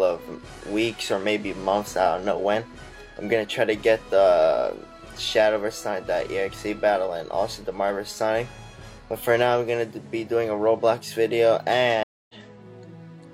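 At 12.03 s a stream reconnect occurs. The connection drops and playback goes silent for 259 ms. A fresh decoder then picks up mid-stream, so the sound returns at 12.35 s roughly a fifth of a second further on, skipping material.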